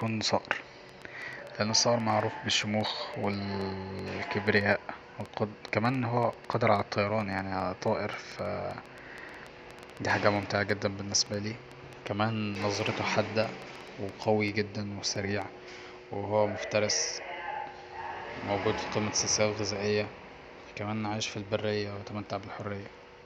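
From 0.01 s to 15.4 s, a train of clicks runs through the speech at about 5.5 per second, irregularly spaced, roughly a hundred of them, ticking over pauses too. Likely interference or a faulty connection or power supply.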